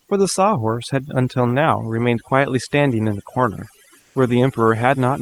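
Throughout the speech, overdone noise removal is audible. The suppressor pushes individual frequency bands down whenever they approach its noise estimate, taking quieter voice components with them. The background drops and breaks up into twinkling specks.

From 3.99 to 4.15 s, a stretch of about 160 ms, comfort noise takes the place of the background. The real ambience, which sits about 36 dB below the loud passages, gives way to a smoother synthetic noise roughly 5 dB quieter. This is likely Opus discontinuous transmission, with the receiver synthesising noise during the pause.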